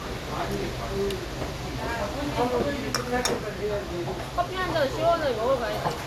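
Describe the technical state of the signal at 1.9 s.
At 1.9 s, as throughout, the sound shows generation loss, most likely from about five successive lossy encodes at a rate that fits MP2 around 96 kbit/s. Each pass requantises on a shifted frame grid, leaving swirly, hollow smearing, blurred attacks and nothing above 16.6 kHz.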